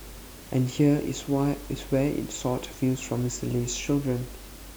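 Nothing goes wrong anywhere in this speech recording, and the only other thing you can hear is the quiet background noise of the room itself, sitting about 20 dB below the talking.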